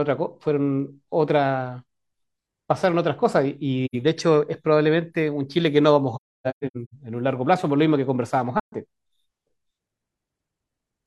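At 3.85 s the speech drops into a short soft-edged gap of about 85 ms, then again at 8.60 s for about 130 ms. Between 6.15 and 6.94 s it breaks up into a string of holes, the longest around a third of a second. That's AAC frame loss with muting: the decoder zeroed the missing frames, and the overlapping windows fade the sound out and back in. The gap lengths fit whole AAC frames going missing.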